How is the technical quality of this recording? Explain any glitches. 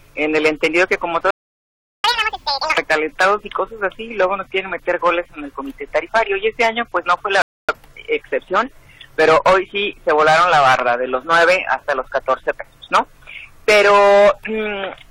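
The technical quality is compromised by three timing faults: a silent gap, a fast high-pitched stretch right after it, and a second pause later on.

From 1.30 to 2.04 s the audio cuts out for about 0.73 s in a playback stall. The player was likely starved of data or had its output thread blocked. The waveform drops to a flat line and the spectrogram shows a blank vertical band before the sound resumes.

From 2.04 to 2.78 s comes catch-up at higher speed. The player resampled its backlog at double speed to recover the lost time, so the audio runs fast and sits roughly ten semitones high. On a spectrogram, the harmonics shift upward and are compressed horizontally, then drop back at 2.78 s.

From 7.42 to 7.69 s a rebuffering stall stops the sound for about 0.27 s while more audio downloads. It then picks up exactly where it left off, so nothing is skipped but the timeline is stretched. It shows as a short flat stretch in the waveform and a clean empty gap in the spectrogram.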